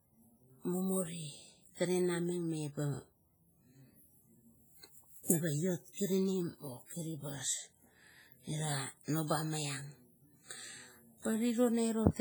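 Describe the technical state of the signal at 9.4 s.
At 9.4 s the speech carries heavy transform-codec damage, likely from WMA compression, present across the whole clip: long blocks smear quantisation noise over tens of milliseconds, giving a ringing, washy hiss that pulses with the speech. A spectrogram shows blurred onsets and patchy holes where weak components were zeroed, consistent with a low bitrate near 24 kbps.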